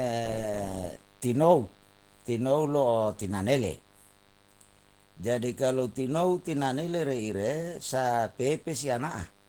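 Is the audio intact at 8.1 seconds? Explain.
No. At 8.1 seconds, as throughout the clip, a 50 Hz mains buzz sits well below the speech. Sharp switching spikes twice per cycle give a raspy, harmonic-rich buzz reaching kilohertz, unlike a smooth, pure hum.

Opus voice compression at 16 kbps in hybrid mode also runs throughout. The band stays full, but the coarsely coded low band sounds hoarse and slightly robotic.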